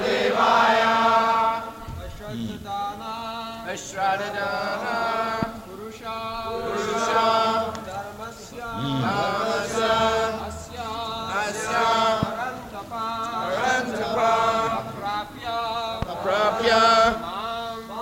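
Three loud pops occur, at 5.43 s, 12.23 s and 16.02 s. Each is a single sharp click standing well above the sound, roughly 15 dB louder. The sound continues underneath. A likely cause is a brief voltage spike from a switch, connector or static discharge.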